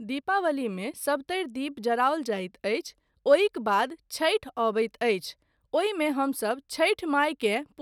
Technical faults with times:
none

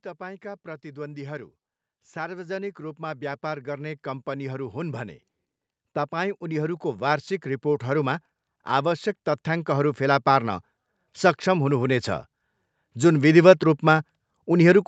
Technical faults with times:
0.17-5.23 automatic gain rising
6.11-10.57 automatic gain rising

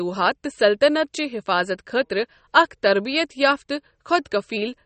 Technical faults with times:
0.00-4.85 MP3 compression

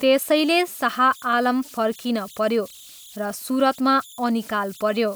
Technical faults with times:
0.00-5.16 converter idle tones

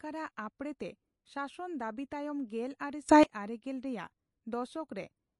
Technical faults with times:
0.00-5.39 MP3 compression
3.09-3.23 sudden gain jump

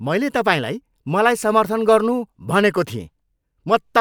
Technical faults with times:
none

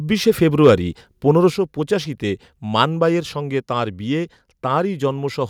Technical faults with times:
0.63-0.70 microphone overload
1.50 microphone volume stepped down

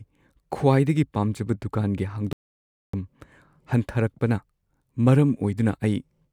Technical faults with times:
2.33-2.93 audio dropout to silence

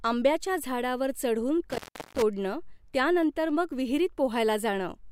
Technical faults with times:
1.70-2.22 intermittent contact

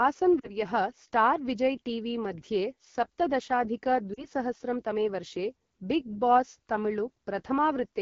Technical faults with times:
0.00-8.01 AMR wideband (HD Voice) codec
0.39-0.56 lost AMR speech frames
4.14-4.26 lost AMR speech frames

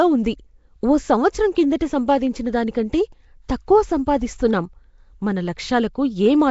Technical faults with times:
0.00-6.51 Nellymoser compression

